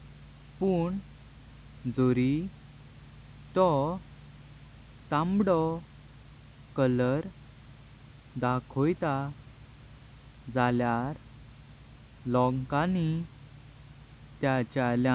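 Nothing stood out on listening to this speech recording, which carries the narrowband sound of an ordinary call path with faint room noise sitting about 33 dB below the speech.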